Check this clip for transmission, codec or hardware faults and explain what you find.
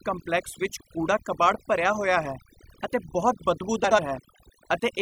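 Two faults are present: heavy-handed noise suppression across the entire clip, and a brief scrambled passage near the end of this speech recording.

Overdone noise removal, throughout: a noise reducer set far too aggressively mutes any frequency band close to its noise estimate, taking the softer parts of the voice along with the noise. The background drops and breaks up into twinkling specks.

Frames out of order, 3.84 to 3.99 s: two adjacent runs of about 72 ms each, which fits three frames apiece, were decoded in swapped order. The stretch plays with its halves exchanged, producing a garbled flutter, though no time is lost.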